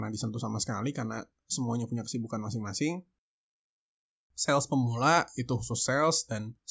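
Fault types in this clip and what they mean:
Nothing stood out on listening to this speech recording.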